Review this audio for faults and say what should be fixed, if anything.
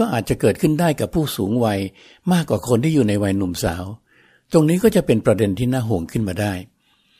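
Nothing to fix: no faults are audible anywhere in the speech.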